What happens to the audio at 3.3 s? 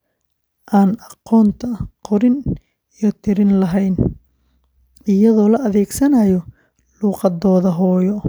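At 3.3 s the speech plays through intact, with no dropout, click, distortion or other fault at that moment.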